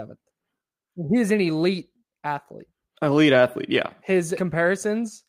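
No technical faults are audible.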